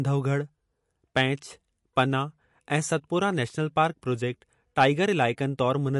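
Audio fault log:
Throughout, MP3 compression. The speech has nothing above 11.3 kHz, so the top end sounds cut off. The damage is plainly audible. Weak frequency detail drops in and out between frames, giving a watery texture. This likely comes from a starved encode, which fits about 50 kbps.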